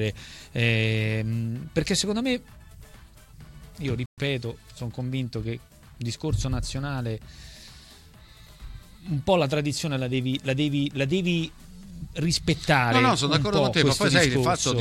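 There's one clear problem in this audio: a playback stall at about 4.06 s, where the sound cuts out mid-flow and the output goes dead silent for 120 ms before picking up again at 4.18 s. That's not a gap in the material itself; it's the player going quiet. The likely cause is the playback side running dry of data, or its audio thread getting blocked briefly, so nothing reached the output until it caught up.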